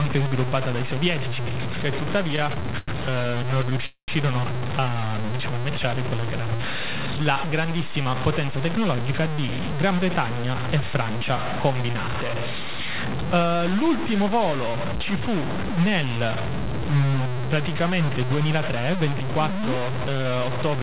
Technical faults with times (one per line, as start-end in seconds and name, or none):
0.00-20.83 low bit depth without dither
2.36-3.84 repeated stalls (stutter)
3.86-4.10 call audio freeze
6.58-8.23 jitter buffer speed-up
9.02-9.30 jitter buffer speed-up
18.38-19.56 jitter buffer speed-up